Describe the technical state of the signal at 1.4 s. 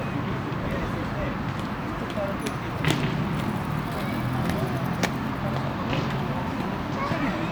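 At 1.4 s the signal is intact, with no audible technical fault at that moment.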